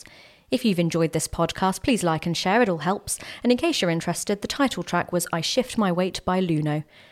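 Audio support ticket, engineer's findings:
Speech signal reviewed end to end with no audible technical fault found and nothing attributable to the capture, transport or playback chain.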